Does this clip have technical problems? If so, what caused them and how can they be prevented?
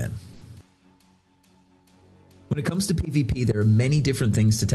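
Yes, there's a short stall from a late packet at about 0.33 to 0.43 s. A packet turned up late, the jitter buffer ran dry, and the receiver stretched the last sound for about 80 ms before carrying on, so nothing is lost but everything after lands 80 ms later. Giving the jitter buffer a bit more headroom, or fixing whatever is causing the network delay spikes, would prevent it.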